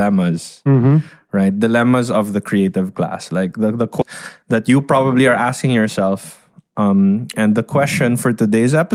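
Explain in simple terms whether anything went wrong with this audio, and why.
Right after "class like the the", around 4.01 to 4.03 s, there's a skip ahead: roughly 0.7 seconds of speech got dropped and playback just jumps forward.

Then from 4.42 to 5.05 s, just before "are asking", a jitter buffer speed-up trims tiny slices to catch up, so the speech runs about 9% faster at the same pitch.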